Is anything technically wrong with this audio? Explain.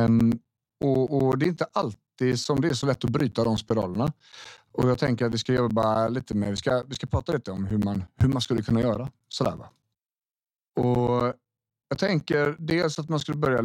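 Yes. From 0.07 s to 13.59 s, the speech carries periodic USB or driver dropouts every 0.125 s. A blocked bus or driver repeatedly silences around 10 ms, about a hundred times. This produces a steady eight-per-second ticking, heard only under signal. The waveform shows evenly spaced flat gaps, and the spectrogram shows thin vertical broadband lines.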